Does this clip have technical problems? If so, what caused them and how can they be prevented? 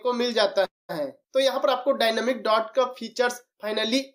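Yes. A call audio freeze at 0.65–0.91 s stretches the last sound into a fading buzz or hiss, then about 190 ms of silence, before the audio resumes exactly where it stopped, now 236 ms later. The likely cause is delayed packets that let the jitter buffer run empty. A more stable network path or a deeper adaptive jitter buffer would prevent it.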